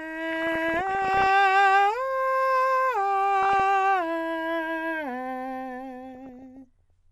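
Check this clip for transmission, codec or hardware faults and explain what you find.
Two faults are audible in this music clip: low-rate MP2 coding throughout and three bursts of DAB burbling.

MP2 compression, throughout: the music sounds dull, gurgly and granular, likely from MPEG Layer II coding near 80 kbps switching off upper sub-bands and coarsely quantising the rest.

DAB burbling, 0.32–1.30 s, 3.43–3.60 s and 6.15–6.90 s: bit errors slip past error correction, corrupting sub-band samples and scale factors, so short noise blips appear in single sub-bands and bands jump in level.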